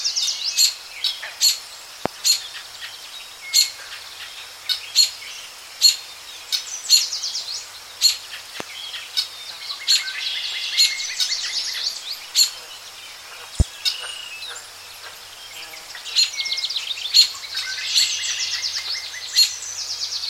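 A sharp, loud pop cuts through the sound three times, at 2.06 to 2.08 s, 8.60 to 8.63 s and 13.60 to 13.63 s. Each is a single burst lasting about 30 ms and standing roughly 20 dB above the surrounding level, with the audio continuing unbroken beneath it. This is a loud pop, likely caused by a brief voltage spike from a switch, a plug or a driver glitch being added to the signal and then shaped by the circuitry downstream.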